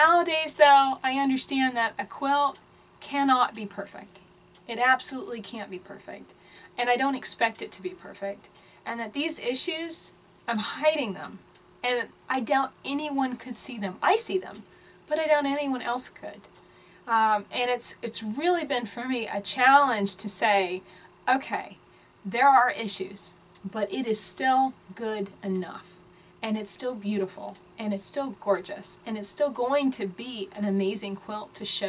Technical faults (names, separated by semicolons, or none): none